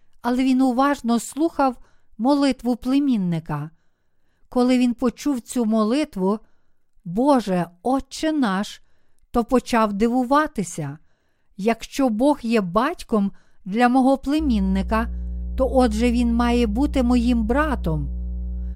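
From about 14.4 s, right after "є батьком для мого", mains hum comes in: a steady 60 Hz drone, roughly 10 dB under the speech, from power-line coupling.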